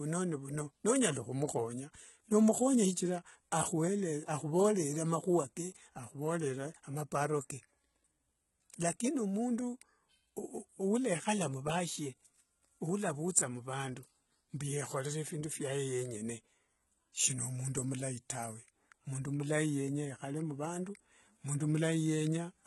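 Throughout the speech, the treble sounds synthetic. Nothing is present above 11.8 kHz. The upper band sounds copied up from lower frequencies, so harmonics fail to line up. S sounds turn gritty and lispy. The likely cause is heavy HE-AAC compression, fitting a bitrate near 16 kbps.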